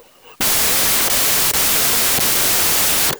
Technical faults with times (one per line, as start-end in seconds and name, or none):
0.00-3.20 wrong sample width